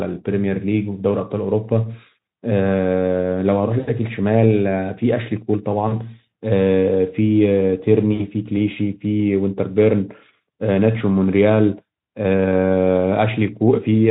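VoIP packet loss concealed by the speech codec occurs at 3.79–3.89 s, 5.87–6.04 s and 8.13–8.26 s. With roughly 80, 40 and 60 ms missing, the Speex decoder extends its last pitch and filter state, producing a stretched buzzy tone or coloured noise that fades and lingers briefly afterward.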